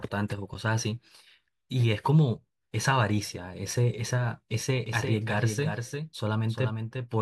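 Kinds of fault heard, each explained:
Doubled audio track: from 4.86 s to the end, a second full-band copy of the speech runs behind the original by roughly 0.4 s, sitting about 5 dB lower. It cuts in abruptly and carries no decay or room colour, so it reads as a discrete, clean echo of each syllable rather than reverberation. The likely cause is the same signal reaching the mix twice, once through a slower capture or routing path.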